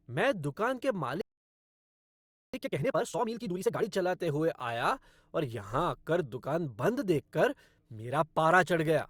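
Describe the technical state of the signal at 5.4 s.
At 5.4 s the signal is intact, with no audible fault at that moment.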